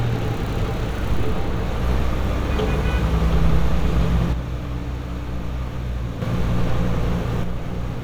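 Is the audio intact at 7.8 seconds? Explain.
No. From 7.44 s to the end of the clip at 8.03 s, the everyday sound drops abruptly by about 6 dB and stays there. The likely cause is one channel dropping out: with one side of the stereo pair gone, the mono sum keeps only half of whatever both channels shared, and anything present only in the lost channel vanishes. Unlike a fade or gain change, the drop is a single instant step, not a ramp.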